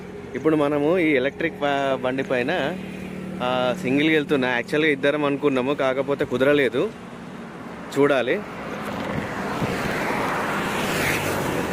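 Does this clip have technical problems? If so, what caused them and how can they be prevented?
Yes: periodic USB or driver dropouts from 9.54 to 11.65 s, with about forty ticks every 0.062 s, each skipping a couple of milliseconds of sound. A background task likely stalls the audio driver or USB bus. Their strict spacing sets them apart from random clicks. Prevent this by raising the buffer size and disabling power-saving or polling tasks that share the USB bus.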